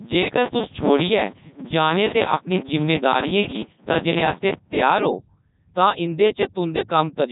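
Speech runs through the Codec 2 vocoder for the whole clip, sounding robotic and buzzy, consistent with its 3.2 kbit/s mode. The voice is rebuilt from sine harmonics, so a spectrogram shows neat harmonic stripes stopping at 3.8 kHz, and the waveform loses its original shape.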